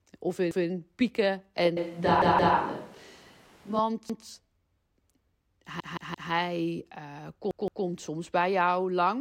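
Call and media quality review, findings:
Repeated buffer: same 171 ms chunk of speech replayed with hard joins, a stutter rather than a gap. 0.51–0.68 s (one repeat), 2.22–2.56 s (two), 4.10–4.27 s (one), 5.80–6.32 s (three), 7.51–7.85 s (two). Playout buffer underrun. The device re-sent the last block, and the fixed length fits an 8192-sample buffer. Unlike packet loss concealment, nothing is skipped or smeared. Identical audio recurs exactly, so the timeline stretches.

Switch to a distant microphone: 1.77–3.79 s, speech abruptly turns roomy and hollow, thinner bass, room noise about 30 dB under speech, level roughly unchanged. Likely the close mic dropped out and capture fell back to a farther device, then snapped back. Unlike added reverb or an EQ change, both transitions are instant and the noise floor rises with them. The 2.22 s stutter sits inside this span.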